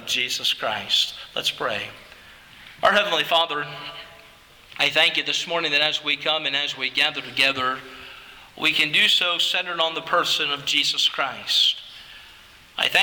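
No technical faults are audible.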